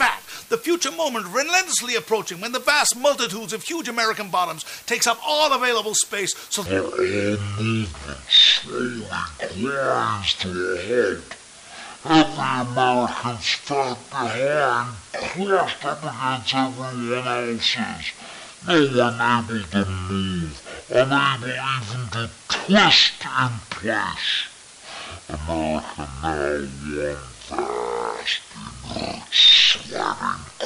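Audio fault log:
Throughout: low bit depth with dither. The sound sits on a steady, even hiss with no grit or distortion, since dither turns the rounding error of what sounds like only 7 bits into flat noise, around 25 dB below the signal.
6.66 s to the end: section at the wrong speed. Everything from here plays at about half speed (0.507x), so it drags and drops roughly ten semitones in pitch, likely because an editor or player ran this stretch against the wrong clock.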